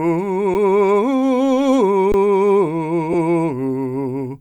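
At 0.54 s and again from 2.12 to 2.14 s, the music drops out in an underrun with held sample. The output buffer ran dry, so the converter froze on its last value for 10 ms and then 20 ms. On the waveform this is a flat horizontal line. On the spectrogram it is a brief blank vertical band. Roughly that much music is skipped each time.

At 3.13 s comes a brief lost LE Audio frame gap. For 10 ms, which fits a single dropped LC3 frame, the decoder repeated the previous spectrum with randomised signs. The tonal content smears into a short burst of noise. On the spectrogram, the harmonic lines blur into diffuse energy for that sliver before recovering. The light lossy compression underneath does only slight damage around it.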